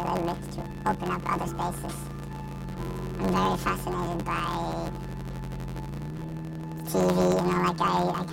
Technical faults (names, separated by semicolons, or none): planar audio read as interleaved